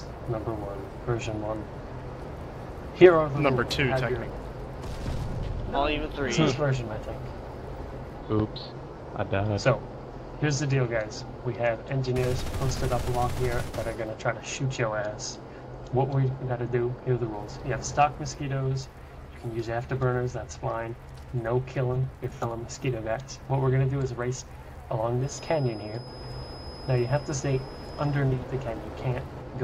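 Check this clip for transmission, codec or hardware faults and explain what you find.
One fault stands out, a feedback whistle from 25.19 s to 28.23 s. A thin, steady tone at 5.1 kHz sits behind the sound, roughly 20 dB below it, swelling and fading slowly in level without growing. The likely cause is a loudspeaker-to-microphone loop held just at the edge of feedback, sustaining one frequency. On a spectrogram it appears as a narrow horizontal line at 5.1 kHz across those three seconds. The waveform barely shows it because it sits so far beneath the main signal.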